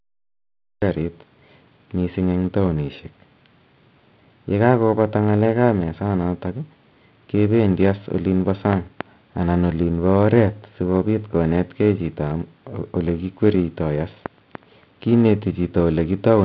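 The first 0.82 s is digital silence. Then the speech cuts in abruptly, already mid-sound. This is a cut-off start: the recording or stream began late. There is no natural attack or fade-in, just a hard entry at 0.82 s.

Periodic clock jitter runs through the whole clip. The converter's sampling clock wobbles at around 1 kHz. Each component of the speech gains sidebands spaced that far above and below it. The result is a rough, metallic edge, strongest on higher frequencies, which disappears during pauses. The G.711 telephone band is audible beneath this, capped at 4 kHz.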